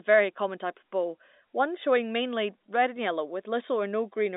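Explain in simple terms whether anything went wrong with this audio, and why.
Nothing went wrong with this audio; it simply has the narrow, slightly muffled sound of an ordinary telephone line.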